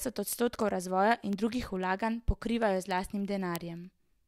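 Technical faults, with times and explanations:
0.11 to 4.27 s, word clock ticks: the receiving device runs on its own clock, a few hundred parts per million off the sender's, so one sample slips roughly every 70 ms, giving around fifty sharp, steady ticks through the speech.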